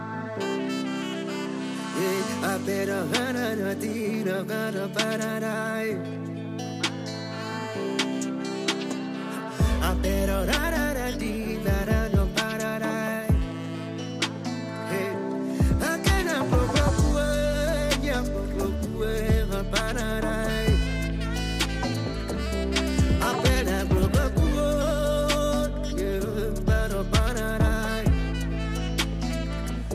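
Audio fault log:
throughout: sample clock jitter. An unsteady clock, roughly 1.5 microseconds, mistimes samples. A fine hiss about 40 dB down grows on loud, bright sound.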